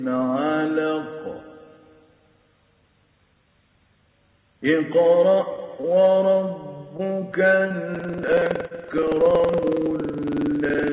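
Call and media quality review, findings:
Short stall from a late packet, 5.81–5.86 s and 7.49–7.52 s: sound briefly held with a slight buzz or dip, nothing dropped. Jitter buffer ran dry. Receiver stretched the last sound for about 23 ms, then about 16 ms, and resumed in place.

Short concealed packet loss, 6.97–7.01 s, 7.68–7.72 s and 8.68–8.73 s: brief wobble, with a slight smear. About 20 ms never reached the decoder each time. Concealment extrapolated the preceding sound for 15, 20 and 25 ms, then cross-faded back.

Buffer tearing, 7.91 s to end: continuous robotic rattle at 21.5 Hz, present only while sound plays. Playback writer and hardware reader crossed inside each period, which fits a 2048-sample buffer. Roughly 15% of each period replays audio from about 150 ms earlier, with hard joins on both sides.

On the G.711 mu-law call path, nothing is heard above 4 kHz.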